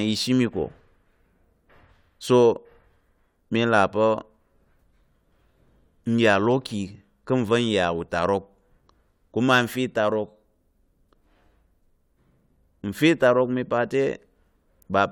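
At 7.33 s the speech has an underrun with held sample: the output buffer briefly runs dry and the converter holds its last value, flattening the waveform for about 0.33 ms. A fraction of a millisecond of audio is lost.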